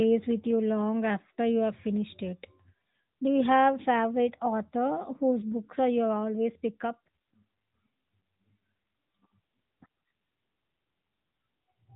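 Speech carrying AMR narrowband mobile codec damage throughout: nothing passes above about 3.8 kHz, leaving a flat spectrogram ceiling, and the plainly buzzy, synthetic texture fits a mid-rate mode near 10 kbps.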